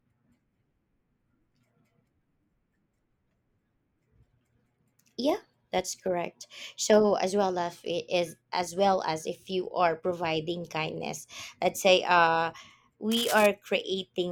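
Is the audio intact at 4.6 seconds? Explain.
Yes, the speech at 4.6 seconds is intact, with no audible fault at that moment.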